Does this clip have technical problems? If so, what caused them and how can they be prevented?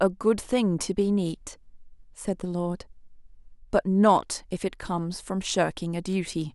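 Yes. Word clock ticks run from 0.57 s to 6.13 s: about five sharp ticks in the speech, roughly every one and a half seconds. The receiving device ran on its own clock, drifting against the sender's by something like 15 ppm. Each time the two clocks slipped, one sample was dropped or repeated, producing a tick. To prevent this, lock the receiving device to the incoming digital signal or to a shared master word clock.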